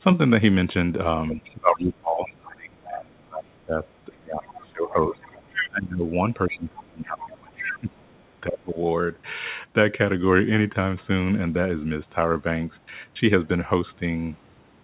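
Speech that carries other side's voice leaking through at 1.3–2.89 s, 3.94–5.69 s and 7.19–8.32 s, likely residual loudspeaker echo left by the echo canceller, sitting well below the talker at the first and third spots and nearly level with them in the middle. Across 1.34–8.77 s the talker is also hit by speech suppression in double talk, dipping by as much as about 25 dB for roughly five seconds in total while the far side plays on the loudspeaker. The likely cause is the canceller turning everything down when both sides overlap. The whole clip has nothing above 4 kHz, which fits a G.711 mu-law call path.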